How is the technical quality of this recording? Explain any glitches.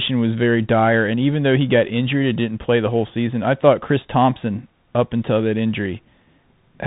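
Quality is poor throughout. Bluetooth CVSD headset codec damage runs the whole clip: one-bit delta coding with an adapting step, which fits a 64 kbps link, cuts everything above 4 kHz, roughens s sounds, and leaves granular hiss beneath the speech.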